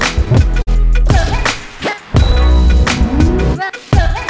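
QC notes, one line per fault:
throughout, clock drift between sender and receiver: the sending end's clock runs around 3 percent slow, so the jitter buffer keeps draining and the receiver patches it by repeating tiny bits. You get small, unevenly spaced hiccups across the whole thing, all on top of a call-codec band that stops at 8 kHz, which fits G.722.
0.62–0.69 s, short stall from a late packet: a packet showed up late and the buffer ran dry, so the receiver held the last sound for about 50 ms until it arrived, then picked up right where it left off. Nothing's missing, just a stretched moment with a faint buzz or dip.
1.68–4.10 s, repeated timing corrections: with the sender running at about 97 percent speed, the receiver keeps slipping in little repeated slices to stay in step, adding roughly a tenth of a second in total. They all go the same way but land unevenly.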